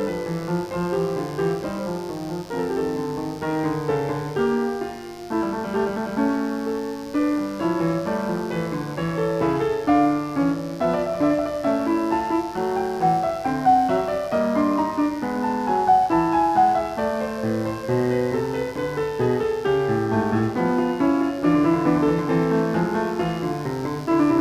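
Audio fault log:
throughout mains buzz: switching spikes from 50 Hz mains leak into the music path, stacking harmonics into a steady, raspy buzz roughly 25 dB below the music.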